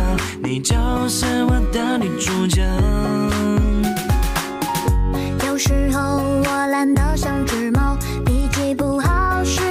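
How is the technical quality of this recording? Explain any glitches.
No glitches or technical faults can be heard here.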